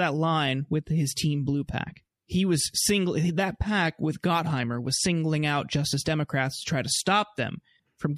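From start to finish the speech carries plainly audible damage that sounds like MP3 compression, likely at a low bitrate, with the character fitting something around 64 kbps. The encoder is starved, so weaker frequency detail flickers in and out from frame to frame. You hear it as a watery, swirly texture, metallic chirps on the s sounds, and consonant attacks that smear rather than snap.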